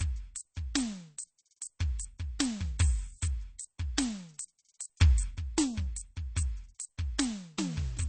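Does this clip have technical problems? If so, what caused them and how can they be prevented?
Yes. Throughout the music there is a watery, swirling quality, and nothing is heard above about 8.3 kHz, so the top end sounds dull and closed in. This is likely MP3 compression at a very low bitrate, around 32 kbps judging by the damage. Short of bits, the encoder cuts the treble at a fixed point and drops quieter frequency lines that flicker in and out between frames, which produces the swirl. To prevent it, encode at a much higher bitrate or keep a lossless copy.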